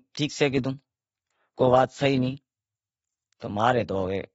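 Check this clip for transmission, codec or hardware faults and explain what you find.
The speech carries codec damage throughout, with nothing above 7.7 kHz. This is likely AAC compression at a low bitrate, near 24 kbps. Coarse quantisation of each frame's frequency lines dulls and smears the sound and makes sibilants fizzy. A spectrogram shows a hard ceiling and patchy gaps below it.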